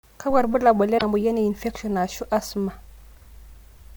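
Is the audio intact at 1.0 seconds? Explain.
No. Around 0.95 to 1.03 s the speech hits damaged data in the compressed stream: the decoder misreads the corrupted frames there, loses sync and hunts for the next frame header, so you get a short glitch such as a chirp, squawk, click or brief hole.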